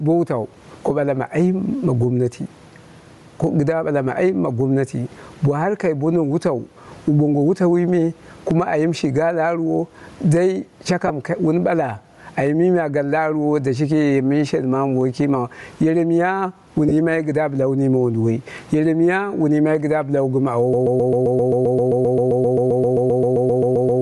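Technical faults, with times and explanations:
Throughout, gain pumping: loud and soft parts sit closer in level and the sound is squashed, a swing of roughly 20 dB, likely from gain set far too high with a fast limiter clamping it. On a waveform the envelope looks flattened.
Throughout, Bluetooth LC3 compression: the speech carries a breathy, grainy edge from a transform codec in short 7.5 ms frames, whose upper spectrum is partly zeroed and refilled with noise, likely LC3 at a low rate fitting 48 kbps. A spectrogram shows patchy, speckled high bands instead of clean harmonics.
11.07 s and 16.89 s, lost LE Audio frames: right after "ga la arwo dai", and between "ma yere miya wun" and "kɨdda bɨla wu mime", about 22 ms each becomes a brief noisy smear as the decoder repeats the last spectrum with random signs, consistent with three lost frames. Spectrograms show short vertical blurs with smeared harmonics.
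20.73 s to the end, broken-record loop: a 131 ms fragment repeats exactly, back to back, about 25 times until the clip stops, so everything that should have followed is gone, likely from a stalled stream resending its last buffer. The waveform shows identical tiled blocks at a fixed period.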